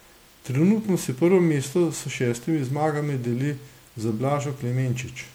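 From start to finish the speech has a swirly, smeared, hollow quality, with consonant attacks blurred, more damage than a single lossy pass at this quality would leave. That points to generation loss, likely from the audio going through MP3 about five times at something like 96 kbit/s. Each re-encode quantises again on a shifted frame grid, so the noise and spectral holes stack up rather than staying put.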